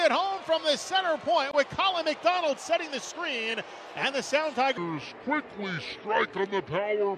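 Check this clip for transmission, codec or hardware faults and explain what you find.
One fault is present: a wrong sample rate from 4.78 s to the end at 7.17 s. Samples are clocked out slower than they were captured, with no conversion, so the sound slows to 0.667 times speed and drops about 7 semitones. That fits 48 kHz material played at 32 kHz.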